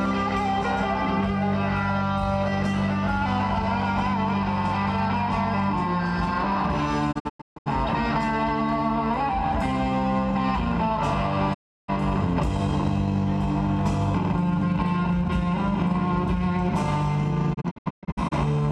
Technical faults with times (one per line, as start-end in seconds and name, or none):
7.11-7.68 digital broadcast dropout
11.53-11.90 digital broadcast dropout
17.53-18.33 digital broadcast dropout